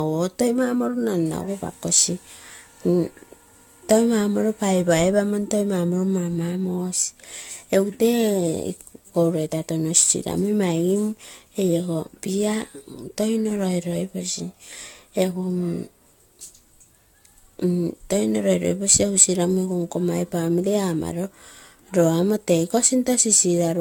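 Throughout, the speech sounds swirly, hollow and smeared, with blurred attacks and nothing above 17 kHz. The likely cause is generation loss from roughly seven stacked AAC re-encodes.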